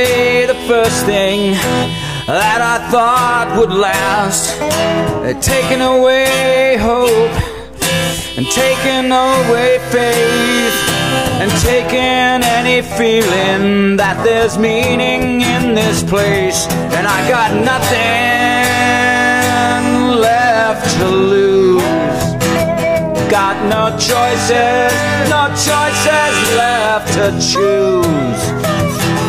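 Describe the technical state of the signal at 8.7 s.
At 8.7 s the signal is intact, with no audible dropout, distortion, noise burst or other technical fault at that moment.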